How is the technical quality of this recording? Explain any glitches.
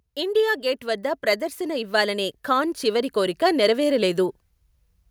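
The recording has one clear fault. From 0.14 s to 4.44 s there is an automatic gain rise: the gain control judged the input too quiet and slowly raised its level by about 10 dB. The voice and the background noise swell together. That shared rise separates it from a speaker moving closer, which would lift the voice but not the room noise.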